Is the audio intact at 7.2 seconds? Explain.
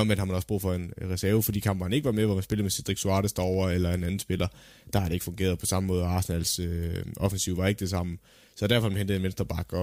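No. Word clock ticks run from 0.48 s, just after "har man også", to 9.66 s, so 7.2 s falls within them. A receiver on its own clock, off by a few tens of ppm, drops or repeats one sample about every half second, giving sharp, uneven ticks.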